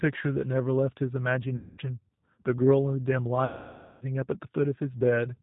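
From the start the speech carries the G.729 codec, here the G.729A variant at 8 kbit/s. Its damage is plainly audible: a slightly rough, synthetic edge, because the decoder rebuilds each 10 ms frame from a vocal tract filter, a pitch predictor and a few pulses. On a spectrogram all energy stops sharply at 4 kHz, and harmonics look smeared and grainy rather than clean.

At 1.56 to 1.81 s comes VoIP packet loss concealed by the speech codec. About 220 ms of audio went missing, which fits eleven 20 ms packets, and the decoder stretches its last pitch and filter into a sound that fades as its gain is lowered frame by frame. The spectrogram shows energy dimming toward the gap's end, and the waveform shows a decaying envelope. A longer dropout of about 560 ms follows at 3.45 to 4.03 s. The speech stays weak for a while after packets resume, visible as lowered amplitude.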